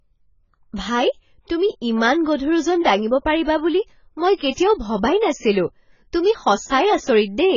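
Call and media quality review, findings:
Encoder likely starved: AAC-LC throughout, heavy damage consistent with a bitrate near 16 kbps. Coarse quantisation of each frame's spectral lines and a low-pass that removes everything above 7 kHz. Heard as dull, smeared speech with warbling on sustained sounds and fizzy sibilants.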